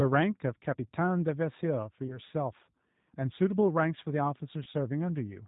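G.729 codec compression runs from the start of the speech. The voice is rebuilt from a vocal tract filter, a pitch predictor and a handful of pulses per frame, with nothing above 4 kHz. The result is plainly rough and synthetic, which fits the 8 kbit/s G.729A variant.

VoIP packet loss concealed by the speech codec occurs from 2.07 to 2.19 s and from 4.64 to 4.68 s. Each drop removes about 20 ms of audio, consistent with a single lost packet. The decoder fills each gap by extending the last pitch and filter at falling gain, giving a brief buzzy or noisy, fading smear. At 2.07 s the disturbance lingers to 2.19 s because each rebuilt frame depends on the one before it.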